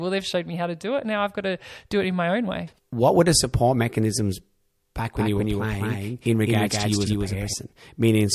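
From 5.16 s to 7.54 s, just after "the support mechanisms back", a doubled audio track appears: a second full-band copy of the speech runs about 200 ms behind, at roughly the same level, and switches on and off abruptly. The likely cause is the signal being captured twice, once through a slower path. The result sounds like a hard, dry slapback echo. On a waveform or spectrogram, every syllable shows a twin shifted by that fixed offset, with no decaying tail between them.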